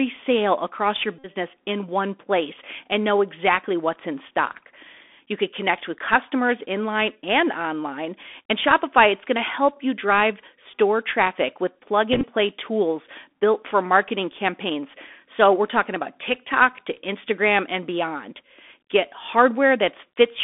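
The whole thing runs through a Bluetooth CVSD headset codec, so you're hearing narrowband speech squeezed into roughly 250 Hz to 3.5 kHz. CVSD sends a single up-or-down bit per sample at 64 kbps, and its adaptive step can't keep pace with sharp, bright sounds. That's why the sibilants come out scratchy, loud high bits go ragged, and there's a grainy hiss sitting under the voice the whole way through.

Then there are three spots where the Bluetooth headset packet repeated. The first is at 1.19 to 1.29 s, right after "sale across your" and before "in one place and". About 52.5 ms of audio went missing there, which points to around fourteen lost packets. The chip kept replaying the last good one every 3.75 ms, so you get a short, steady buzz near 267 Hz. The second is at 6.65 to 6.68 s, after "could connect with customers" and before "and online". Only about 7.5 ms was lost, likely a couple of packets, so it's just a quick tick. 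The third is at 12.13 to 12.26 s, between "store traffic with plug" and "play tools built for". There, about 60 ms of loss is scattered over roughly 105 ms, with no run longer than about 20 ms, so it comes across as a broken, stuttery buzz rather than one solid drone.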